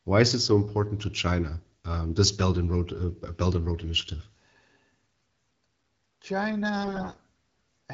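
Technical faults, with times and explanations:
6.83–7.21 s, AMR bit errors: flipped bits in the less protected parts of the frames, at a rate of around 15 percent, misplace the excitation pulses and skew pitch, gain and spectral detail. The sound turns hoarse, scratchy and gargly. Unlike packet loss, it keeps its rough pitch and level without gaps or repeats.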